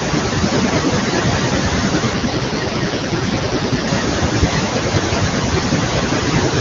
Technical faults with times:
0.00-6.61 speech cut by the noise suppressor
2.13-3.88 AMR rate drop

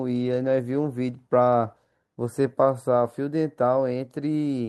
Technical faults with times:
none

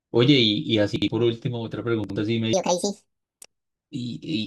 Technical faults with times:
0.96-1.08 chunks out of order
2.04-2.16 chunks out of order
2.53-3.54 section at the wrong speed

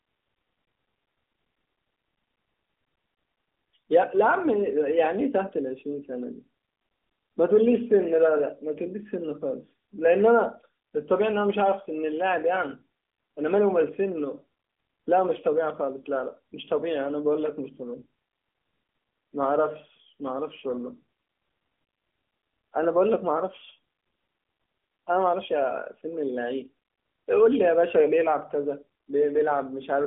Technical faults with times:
none

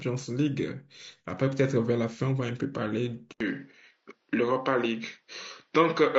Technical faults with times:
0.00-6.18 low-delay AAC compression
3.32-6.18 input switched to a poorer device

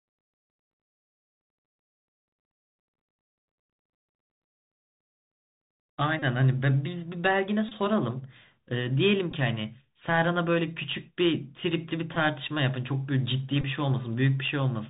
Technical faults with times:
0.00-14.90 Bluetooth CVSD headset codec
6.19-6.22 Bluetooth headset packet repeated
7.69-7.72 Bluetooth headset packet repeated
9.31 Bluetooth headset packet repeated
12.15-12.17 Bluetooth headset packet repeated
13.61-13.64 Bluetooth headset packet repeated

